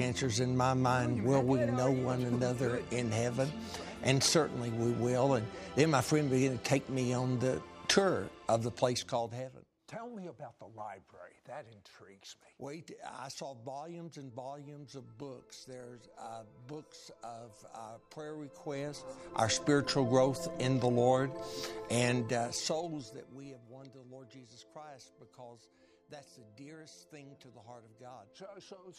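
From 22.13 to 23.71 s there is zipper noise. The level falls by roughly 25 dB in coarse steps, about a hundred per second, with no smoothing between them. Each step leaves a tiny click, so a fast ticking rides on the sound throughout the fade.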